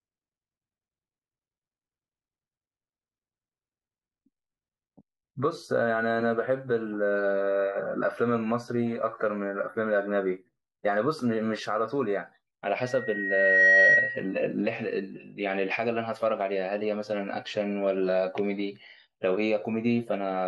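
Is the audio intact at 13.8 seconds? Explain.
No, 13.8 seconds falls inside a loudspeaker feedback squeal running from 12.81 to 14.34 s. The mic is hearing its own speaker, so a 1.9 kHz tone swells over under a second to sit roughly 10 dB above the speech.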